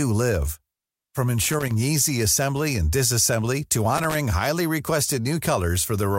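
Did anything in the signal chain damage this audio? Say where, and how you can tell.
Yes, in the analogue wiring. There's loose connector crackle from 1.42 to 1.71 s, just before "easy assembly and disassembly", and again from 3.95 to 4.15 s after "assembly and disassembly to". Those ragged scratchy bursts are a worn contact making and breaking, chopping the signal.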